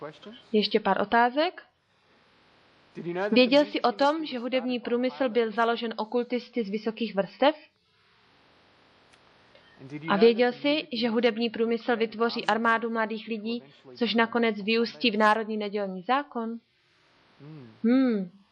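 Nothing technical stands out here; the audio carries on from beginning to end without any audible fault to point to.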